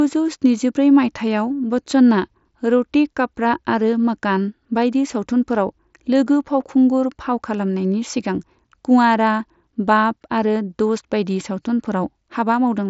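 Speech, with no technical faults to report. The audio carries the signature of a Bluetooth mSBC headset codec, with nothing above about 7.7 kHz and a light graininess on louder passages that is typical of that wideband link working as designed.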